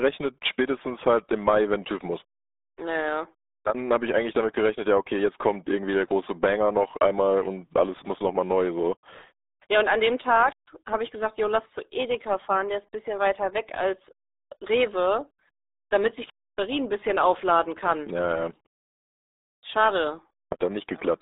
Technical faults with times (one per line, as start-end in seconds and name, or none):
0.00-21.22 RealAudio 14.4 codec